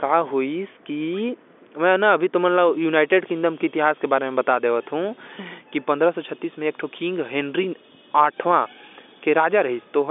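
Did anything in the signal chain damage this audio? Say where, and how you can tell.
No, nothing in the signal chain damaged this audio.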